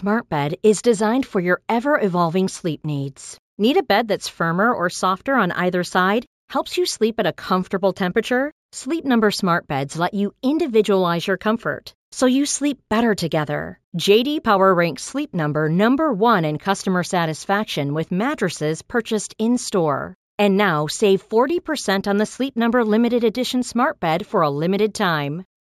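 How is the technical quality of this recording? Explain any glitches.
The recording has one fault throughout its length: imaging from linear upsampling. The rate was raised by straight-line interpolation, which fits a 16 kHz source raised to 48 kHz. That weak filter dulls the top of the band and leaves mirrored spectral copies at 8 to 16 kHz, about 25 dB below the speech, heard as a faint metallic shimmer on sibilants.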